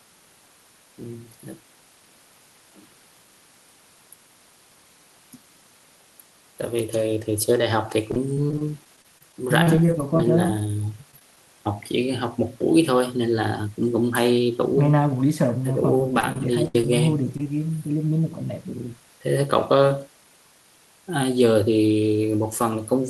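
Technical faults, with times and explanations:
8.11–10.70 s, 11.11–11.37 s and 15.98–16.84 s, repeated packet loss (robotic sound): audio kept arriving too late or not at all, and each hole, up to 35 ms, 15 ms and 66 ms long, was patched by extending the preceding sound. Roughly a tenth to a fifth of each stretch is filled-in, so the sound turns choppy.
17.37–17.40 s and 17.43–17.46 s, short concealed packet loss: two holes of about 20 ms each, close together, were bridged by continuing the last sound before blending back into the real signal. This leaves a quick smear or wobble, and a brief consonant can disappear.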